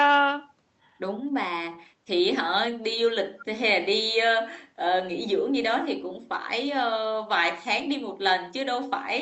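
At 3.40 to 3.44 s a brief, faint repeat of the speech surfaces, delayed by 358 ms and about 25 dB below the direct voice: an echo leak, likely from a far end on loudspeaker whose echo canceller let a scrap of its microphone pickup return. Unlike room reverberation, which trails continuously from every syllable, this is a discrete copy arriving well after the original. It sits within the Opus call audio, whose content stops near 8 kHz.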